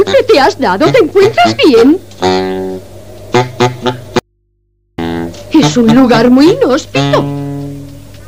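The signal path was most likely interrupted briefly upstream while the input after the break stayed live, producing an audio dropout to a faint residue from 4.19 to 4.98 s. For roughly 0.79 s the wanted sound vanishes abruptly, with no fade, and the gap holds only a low mains hum from the open input, sitting around 50 dB below the normal level. The sound then cuts straight back in mid-flow.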